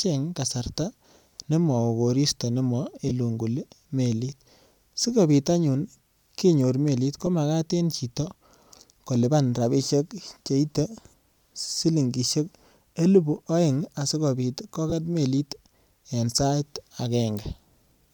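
Speech with four brief noisy smears at 3.09–3.12 s, 7.26 s, 11.61–11.63 s and 14.90–14.93 s. These are lost LE Audio frames: gaps of about 20, 10, 20 and 20 ms, consistent with one or two 10 ms frames, that the LC3 decoder patched by replaying the last spectrum with randomised signs.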